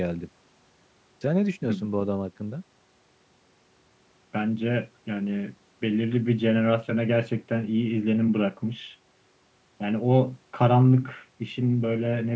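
No faults found in the speech; it has been through normal call microphone processing, which trims the lowest bass and leaves nothing above 8 kHz.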